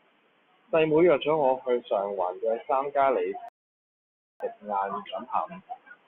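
At 3.49 s the speech cuts to silence for 0.92 s, a rebuffering stall. Playback ran dry, waited for data, then resumed exactly where it stopped.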